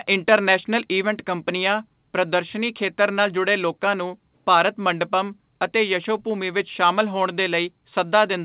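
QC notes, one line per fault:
1.02 s, microphone volume stepped down: the speech and its background both drop suddenly by about 2 dB and stay lower, a clean step rather than a fade. The likely cause is the call software lowering the microphone's input volume in one step, heard through band-limited call audio with nothing above 4 kHz.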